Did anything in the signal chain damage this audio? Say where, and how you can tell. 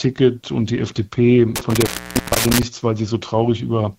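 Yes. Between 1.56 and 2.63 s the sound drops out with crackle at the edges and faint hiss underneath, gaps around 460 ms: intermittent contact in the analogue wiring, a loose cable or plug opening.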